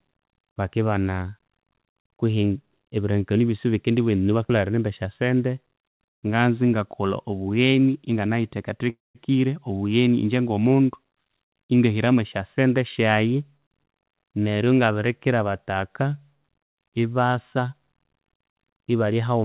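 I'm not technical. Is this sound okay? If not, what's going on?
No, there are a few call glitches in this speech.

At 8.90 to 9.18 s there's a call audio freeze: the sound trails into a fading buzz, then roughly 0.18 s of silence. This is likely delayed data leaving the receiver with nothing to play. When it resumes, nothing is lost, but everything after plays about a quarter second late.

From 13.35 to 14.18 s a jitter buffer speed-up makes the speech run about 9% fast at normal pitch, so it sounds a bit rushed. The receiver is trimming tiny slivers, about a tenth of a second in total, to cut built-up delay.

At 14.31 s there's a skip ahead: about a tenth of a second of speech is simply dropped and playback jumps forward, with the two sides joined almost seamlessly. You'd notice a small clipped bit rather than a pause.

Right after, from 14.40 to 14.93 s, a jitter buffer slow-down plays the speech at about 86% speed, same pitch, so sounds get drawn out and may warble slightly. 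The receiver repeats tiny pieces, adding about 0.08 s, to rebuild its reserve.

The narrow, phone-like tone, with nothing above 4 kHz, comes from the call line itself.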